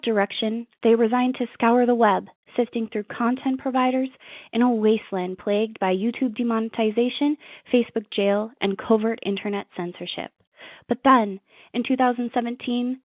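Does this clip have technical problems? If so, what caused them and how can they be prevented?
No, this speech clip has no technical problems to fix. It carries the narrow sound of ordinary G.711 telephone coding at 8,000 samples a second, with nothing above 4 kHz and a faint hiss that rises and falls with the level.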